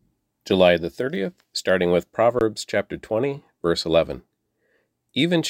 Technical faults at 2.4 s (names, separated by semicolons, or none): underrun with held sample